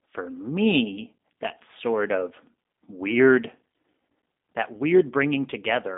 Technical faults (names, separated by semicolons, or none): G.729 codec